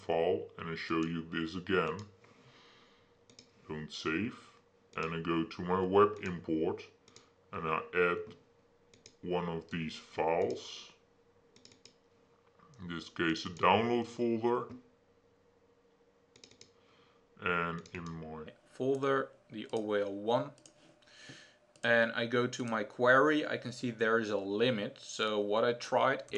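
From the start to 18.47 s, the audio plays as a section at the wrong speed. It runs at 0.787 times its proper rate. Everything sounds slow and heavy. Pitch falls with the tempo, by about four semitones. The sound turns deep and drawn out. The likely cause is a clock mismatch, where an editor or player ran this stretch against the wrong sample rate. At 18.47 s normal speed returns abruptly.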